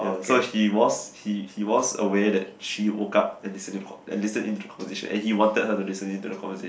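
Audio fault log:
Nothing to log here: this bit of speech comes through without a single fault worth noting.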